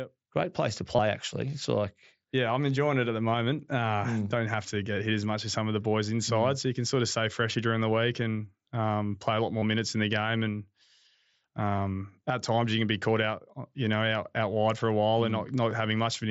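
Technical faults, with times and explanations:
0.96–0.99 s, 9.60–9.62 s, 11.76 s and 15.70 s, concealed Bluetooth headset packet loss: short gaps of 22.5 ms (twice), 15 ms and 7.5 ms, right after "place to", just before "at times you can" and right after "wide for a while". The phone patched each one by repeating the closest-matching bit of the last 20 ms or so. That makes the single 7.5 ms loss nearly invisible, while the longer ones leave a buzzy hold at full level and a tiny warble as the real audio picks back up, over the mSBC headset's light graininess.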